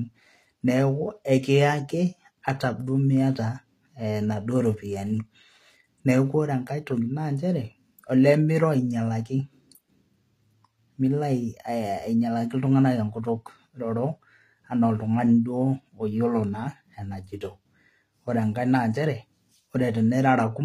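From start to finish, the speech carries plainly audible coding damage. The treble is not quite real. S sounds come out gritty and lispy, with a metallic edge. Nothing reaches above 14.8 kHz. The likely cause is HE-AAC compression at a low rate, around 24 kbps. That codec keeps only the lower spectrum. It rebuilds the top by copying lower bands upward under a coarse envelope, so the upper harmonics no longer line up.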